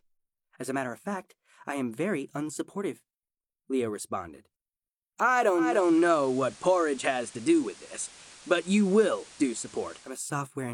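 At 5.54 s the sound cross-fades over 294 ms into a hissier FM feed: digital radio blending to analogue, returning at 10.24 s. Nothing remains above about 15 kHz, the FM band limit, hiss sits around 20 dB down, and level shifts about 1 dB. Unlike simple filtering, hiss and band limit arrive together.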